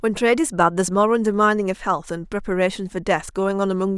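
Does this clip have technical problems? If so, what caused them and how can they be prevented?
No, nothing technical goes wrong in this one, so there's nothing here that needs fixing or guarding against.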